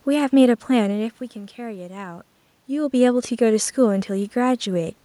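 Nothing stood out on listening to this speech; the room noise and the changes in level around 1 and 2.5 seconds, where the talker shifts position relative to the microphone, belong to the recording itself.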